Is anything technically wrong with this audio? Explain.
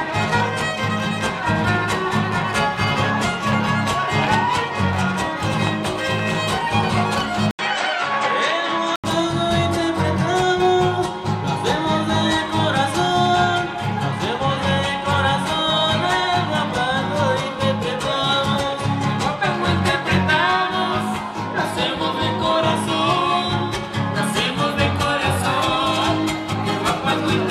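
Yes, two kinds of fault.

From 7.51 to 9.04 s the audio turns duller, with nothing above 8.6 kHz, an 80 ms gap at the switch, a faint new noise floor and little level change. The likely cause is the input switching to a poorer device with a narrower band.

At 18.56 s and 26.52 s the audio jumps ahead by roughly 70 ms and 50 ms, which fits about three and two 23.2 ms frames. These are compressed frames skipped, so each jump is the length of the frames left out.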